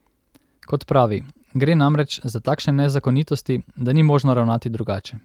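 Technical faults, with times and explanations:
No technical faults can be heard in this speech recording; the signal holds steady from its opening to its final moment.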